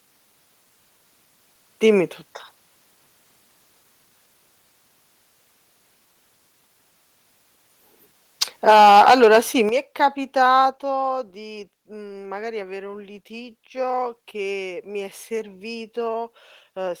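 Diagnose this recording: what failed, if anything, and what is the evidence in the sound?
Microphone overload at 8.41–9.39 s (about 9 dB over, roughly a tenth of samples flattened) and 10.03–10.05 s: converter-stage clipping, likely from excessive input gain, crackling the loudest syllables.

Microphone volume stepped down at 8.70, 9.69 and 10.71 s, by about 3, 8 and 4 dB: call processing likely reacted to clipping, cutting voice and background abruptly.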